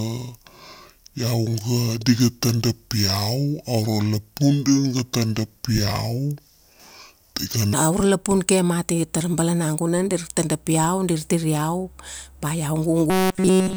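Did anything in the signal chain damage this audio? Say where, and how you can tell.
Yes. From the start to 7.73 s the speech runs at about 0.665 times its proper speed, so it drags and sits roughly seven semitones low. That's a section at the wrong speed, likely a playback or sample-rate conversion stage running it against the wrong clock.

Then, right after "ba iau", from 13.1 s to the end, you get robotic sound from repeated short buffers: a rigid metallic buzz at 188 Hz. Nearly everything there is repeats. That points to a driver or buffer stage, likely looping a roughly 5 ms block.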